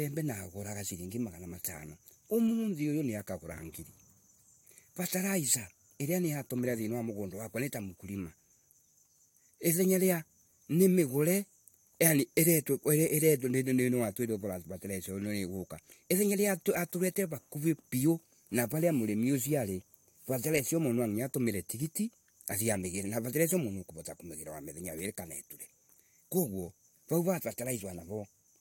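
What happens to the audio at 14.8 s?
Nothing goes wrong at 14.8 s; the speech carries on intact through that moment.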